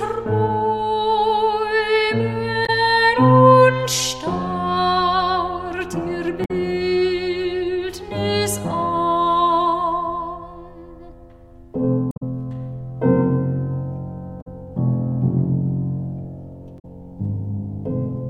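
Damaged data in a compressed stream produces short chirps, squawks, clicks or holes at 2.65–2.70, 6.44–6.51, 12.08–12.23 (shifting timing by about 22 ms), 14.40–14.47 and 16.78–16.85 s. The decoder misreads corrupted frames and resyncs. Each event appears as a broadband smear or blocky gap on the spectrogram.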